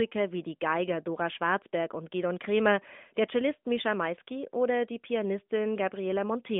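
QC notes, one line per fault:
Nothing to flag here: the audio just has the usual narrowband mobile-phone character of AMR-NB at 12.2 kbps, with nothing above about 3.7 kHz.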